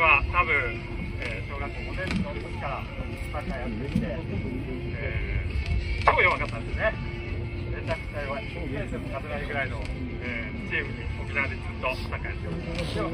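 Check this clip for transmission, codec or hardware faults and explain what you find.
Nothing in the transmission, codec or hardware path stands out as a fault on listening.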